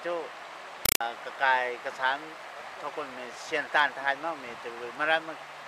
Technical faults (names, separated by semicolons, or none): compressed stream played as audio